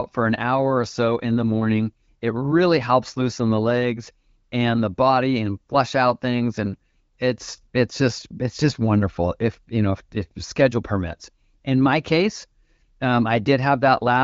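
No technical faults can be heard in the speech; it carries the band-limited character of the AMR wideband (HD Voice) codec, with content ending around 7 kHz and a clarity that fits one of its higher bitrates, near 16 kbit/s.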